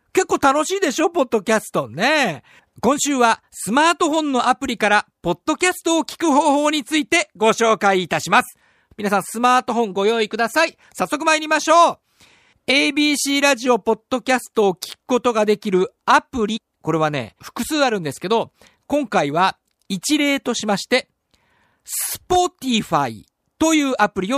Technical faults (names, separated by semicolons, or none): damaged data in a compressed stream